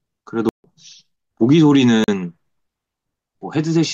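At 0.49 s the speech drops straight into a block of digital silence lasting about 150 ms, out to 0.64 s, and it's heard as a real hole. A second, shorter one at 2.04 to 2.08 s, about 40 ms, comes across more as a pop. In both, a run of samples was zeroed with no fade, most likely because the output buffer wasn't filled in time.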